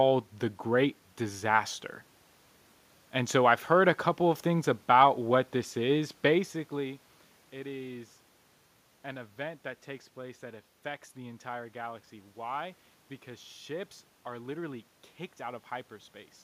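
Nothing stood out on listening; the background noise is part of the room, and the change in level around six and a half seconds is the talker shifting position at the microphone.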